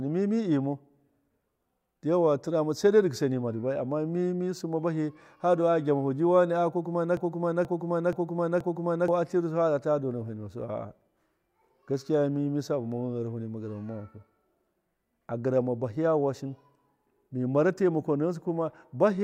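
A stall, likely in the player or stream, caused a broken-record loop from 7.17 to 9.08 s: a 0.48 s fragment of speech repeats four times, replacing the missing audio.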